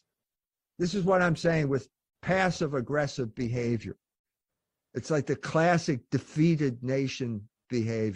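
Speech, opening as an adaptive stream starting at a low bitrate. Until 4.0 s, treble is thin and codec artefacts are strong, which fits about 24 kbit/s Opus. Quality then jumps cleanly, suggesting 64 kbit/s.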